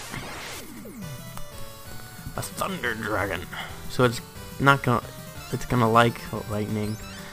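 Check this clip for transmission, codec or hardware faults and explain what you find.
Nothing here points to a transmission, codec or hardware problem, so there's nothing to flag.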